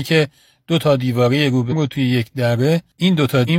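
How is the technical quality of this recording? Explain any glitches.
The speech is marred by two brief glitches from damaged data in a compressed stream, at 1.68 to 1.74 s and 3.44 to 3.50 s. Corrupted bytes there make the decoder misread frames and lose sync while it hunts for the next frame header, producing a short chirp or blip of about 60 ms each time.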